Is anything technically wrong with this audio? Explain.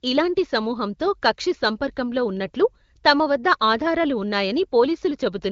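No, nothing stood out as technically wrong when listening to this speech recording.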